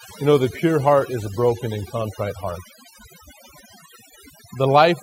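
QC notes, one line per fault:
throughout: overdone noise removal. The speech carries processing artefacts from a noise reduction stage pushed too hard. Between phrases the background drops and breaks up into small twinkling specks, where isolated frequency bands flicker on and off. Quieter parts of the voice sit close to the tool's noise estimate and get pulled down with it. That band-by-band flickering is what separates it from a plain noise gate, which mutes everything at once.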